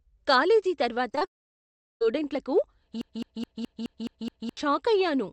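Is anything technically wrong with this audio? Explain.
Yes. This speech clip has three kinds of fault, all from network or stream trouble on a call path.

Short concealed packet loss occurs three times in a row, at 1.11, 1.15 and 1.19 s, running to about 1.23 s. Each time roughly 20 ms of audio failed to arrive in time. The receiver bridged each gap by extending the preceding sound, then blended back into the real signal. The result is a quick smeared, wobbly patch. Brief consonant detail there can be lost.

A long network dropout follows, from 1.25 to 2.03 s, which likely comes from the network. About 760 ms of audio never arrived. The receiver first continued the last sound as a fading buzz or hiss. After that, about 720 ms is silence. The speech then resumes further on. The lost section is simply gone.

A broken-record loop runs from 3.01 to 4.57 s, likely from a stalled stream or player. 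One 211 ms fragment repeats seven times, back to back. It sounds like a stuck, stuttering repetition of the same tiny piece of sound. The speech that belonged in that span is never heard.

The call path itself runs through Opus. Its upper frequencies are cut off at about 8 kHz.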